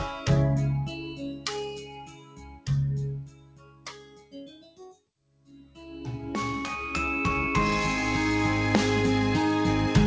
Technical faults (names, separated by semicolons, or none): noise suppressor applied to music or sounds; sound cut by the noise suppressor